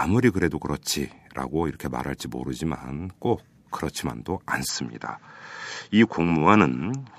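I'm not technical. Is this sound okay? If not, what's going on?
No. At 4.69 seconds the recording most likely switched to a different, lower-quality microphone, an input switched to a poorer device, and it stays on it until the end. That second microphone can't pick up the highest sounds, so nothing above about 7.6 kHz gets through. The voice turns slightly duller and less crisp from that moment. The switch is seamless, with no gap and no jump in loudness, and the new background hiss is very faint.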